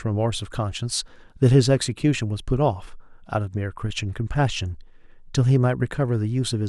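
A speech clip with clock slip clicks running from 0.12 s to the end, a fast ticking roughly every 40 ms, likely from two unsynchronised clocks differing by something like 500 ppm.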